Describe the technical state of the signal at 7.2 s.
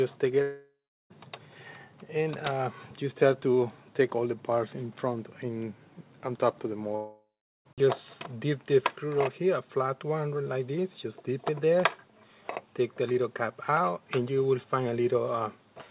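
At 7.2 s the signal is inside a gap from 6.96 to 7.67 s, likely a long network dropout. The last sound smears into a fading buzz, then drops to silence for 0.41 s. Unlike a brief packet-loss glitch, about 0.7 s of audio is lost for good, not delayed.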